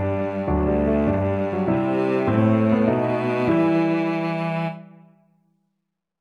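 Nothing is technically wrong with this audio; no faults can be heard at any point.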